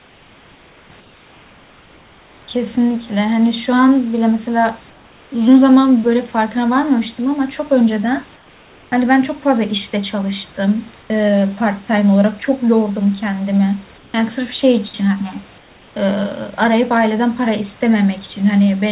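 Comfort noise in place of the background fills the pauses at 0.0–0.9, 1.0–2.48, 4.9–5.32, 8.36–8.92, 11.02–11.1, 13.98–14.14 and 15.58–15.96 s. The room hiss turns flat, featureless and about 2–3 dB quieter, likely synthetic noise from discontinuous transmission. Unlike a gate, it never falls to silence.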